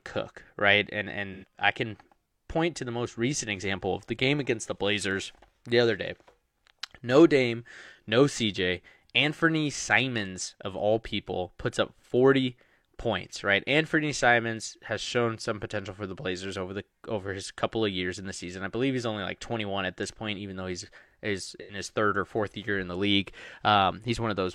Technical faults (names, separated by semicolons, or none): AAC frame loss with concealment